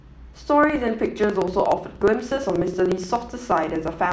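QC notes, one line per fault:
0.58–4.13 s, block size mismatch (truncated): each block is longer than the next stage reads, so its tail is discarded. Speech runs 1.07 times fast at roughly normal pitch, with a 16.7 Hz buzz fitting 1024-sample blocks. Waveform shows splice jumps every 60 ms; spectrogram shows matching vertical striations.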